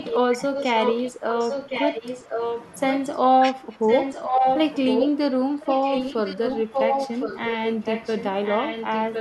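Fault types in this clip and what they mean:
echo leak: a copy of the speech returns about 1.06 s late and nearly as loud, likely loudspeaker pickup that the far-end canceller missed.
speech suppressed in double talk: during overlapping talk the speech dips briefly by around 10 dB, likely the canceller turning down both sides at once.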